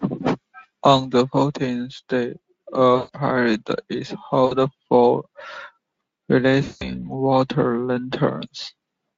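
Speech drops out three times, and VoIP packet loss concealment in the speech codec fills each gap. The gaps run 2.95 to 3.09 s, 4.45 to 4.55 s, and 6.63 to 6.90 s. The decoder extends its last pitch and filter, lowering gain. Each gap becomes a buzzy tone or coloured noise that fades away.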